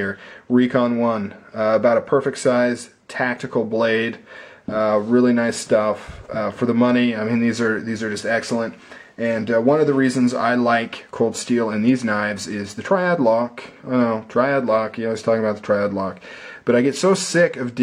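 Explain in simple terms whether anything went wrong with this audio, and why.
Nothing went wrong with this audio that can be heard.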